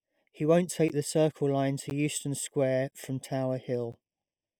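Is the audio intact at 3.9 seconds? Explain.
No. At 3.92 s a gap between chunks inserts a hole of about 13 ms, fitting 1-second chunks; unlike a dropout, nothing is lost, the sound simply resumes late. Throughout, including here, a channel delay (comb filtering) of under half a millisecond cancels evenly spaced frequencies from around 1.5 kHz, giving a hollow, phasey tone rather than a broad EQ dip.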